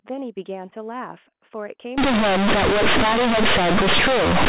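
Speech over G.711 telephone coding, band-limited below 4 kHz. From 1.98 s to the end, companded audio is read as linear. The mu-law bytes are played as plain 8-bit samples without expansion. Quiet parts become as loud as peaks, giving harsh, buzzy distortion and heavy noise in pauses.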